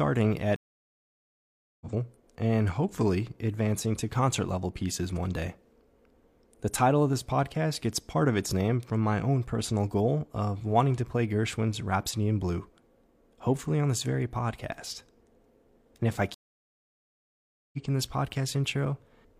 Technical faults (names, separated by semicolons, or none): stream reconnect